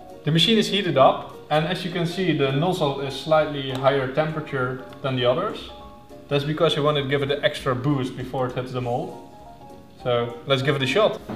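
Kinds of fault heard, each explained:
No kinds of fault are heard in this clip.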